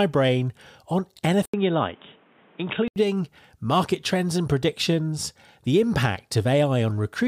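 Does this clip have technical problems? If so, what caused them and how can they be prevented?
Yes. After "brain on", a brief dropout at 1.46 s leads into dull, band-limited speech with nothing above 3.8 kHz and a new low noise floor until 2.96 s, likely from an input switched to a poorer device. Lock the recording input to one microphone and disable automatic device switching.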